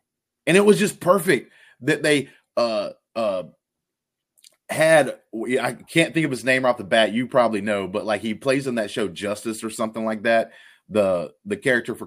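No technical faults can be heard anywhere in the recording.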